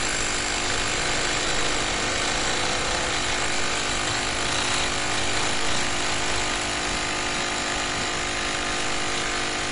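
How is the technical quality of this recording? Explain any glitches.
The recording is noticeably degraded by a single fault that runs through the whole clip.

MP3 compression, throughout: nothing is heard above about 10.6 kHz, and the remaining detail has a watery, swirling quality with smeared onsets. This is likely the work of a heavily squeezed MP3 encoder, consistent with a rate near 40 kbps. Starved of bits, it discards the treble above a fixed cut-off and drops faint frequency components that flicker in and out between frames, which produces the swirl and dulls the attacks.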